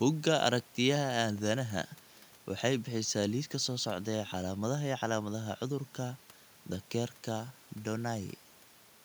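Nothing stood out on listening to this speech recording, with only the room's background noise audible at about 30 dB below the speech.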